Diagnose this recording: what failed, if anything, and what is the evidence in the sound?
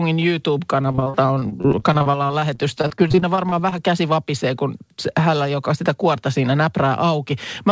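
The failure is in the network stage: repeated packet loss (robotic sound) from 0.82 s to 3.73 s. The speech turns choppy there. Close to thirty short holes break it up, the longest about 38 ms. Each hole is bridged by stretching the last received sound, so about a fifth of that span is patched rather than real. The cutoff near 8 kHz fits the wideband G.722 call codec and is not part of the fault.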